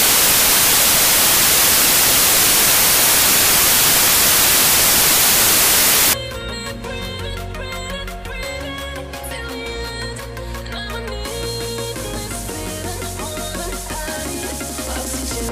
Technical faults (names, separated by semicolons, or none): samples built from the wrong bytes